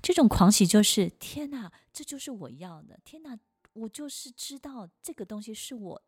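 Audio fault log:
0.74 to 1.95 s, zipper noise: the speech level drops by about 20 dB in coarse 2 dB steps, roughly ten per second, with no smoothing between them. Each jump leaves a small click, so a ticking rides on the fade. A smooth fader-style change would glide quietly with no such ticks.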